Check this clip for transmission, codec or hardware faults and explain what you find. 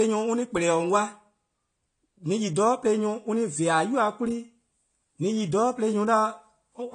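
One fault runs through the whole speech recording: AAC compression. It sounds dull and smeared, with a fizzy, warbling edge on sibilants, and nothing remains above 10 kHz. The likely cause is AAC-LC coding at a low bitrate, which fits a bitrate near 32 kbps, where the encoder quantises its frequency lines coarsely and drops the top band. A spectrogram would show a hard ceiling at 10 kHz, with patchy, hole-ridden energy in the upper bands below it.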